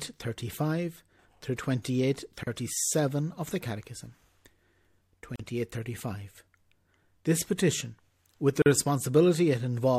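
At 2.43, 5.36 and 8.62 s the speech drops out briefly, about 36, 38 and 41 ms, a gap at a join of encoded pieces. Each segment kept its encoder start delay and padded final frame, so short silences with smeared edges cut in before the speech resumes.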